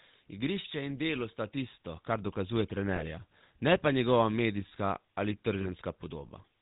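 The speech passes through the GSM full-rate codec from start to finish. The sound points to the 13 kbps rate: the codec rebuilds each stretch from a vocal-tract filter driven by a sparse, evenly spaced pulse train rather than the real excitation, and it discards everything above 4 kHz. The result is plainly audible: a dull, band-limited voice with a constant buzzy, gravelly texture, harshest on the brighter, higher-pitched parts of the voice.

From 2.96 to 3.03 s, just after "tisto kar dokazuje", lost GSM frames occur. The decoder receives no usable data for about 20 ms of audio, so it reuses the previous good frame's parameters. The gap is short enough that the sound doesn't fade out but turns into a brief rough, metallic ring. The same thing happens from 5.62 to 5.68 s, again covering roughly 20 ms, with a similar short metallic smear in place of the missing audio.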